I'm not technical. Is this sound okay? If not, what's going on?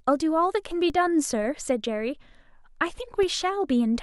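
No. There are two low thumps, at 0.90 s and 3.23 s, from a DC step: the waveform's resting level suddenly jumps and then fades back. Unlike a mouth pop or a crackle, the thump happens without disturbing the speech itself.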